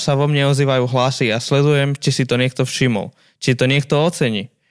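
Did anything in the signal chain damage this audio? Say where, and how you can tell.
No, nothing in this speech recording stood out as damage from any stage of the signal chain on listening.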